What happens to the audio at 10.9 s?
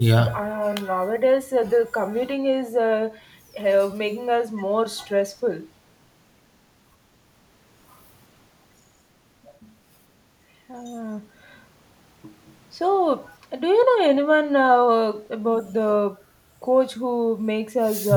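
Nothing goes wrong at 10.9 s: the speech carries on intact there, with no dropout, click or distortion.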